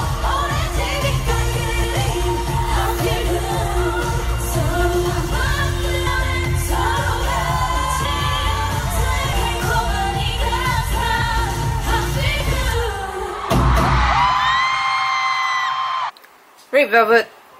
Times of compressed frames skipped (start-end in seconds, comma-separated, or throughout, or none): 11.21, 12.40